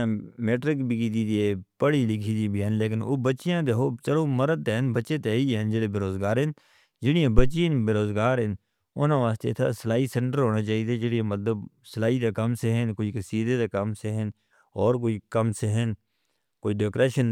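At 7.38 s, switching a supply causes a phantom power thump: deep thud, about -5 dBFS, fading in 40 ms, without handling noise's rustle.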